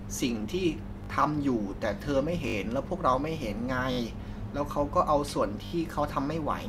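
Speech with four repeated-buffer stutters, at 1.04–1.08 s, 2.48–2.54 s, 3.92–3.98 s and 5.66–5.72 s. New audio arrived late each time, so playback looped the last block, which fits a 20 ms buffer. The first event sounds the fragment three times, and the rest four times, each with a hard join. Because the pieces are so short, the stutters come across as brief buzzy clicks, with little or no audio lost.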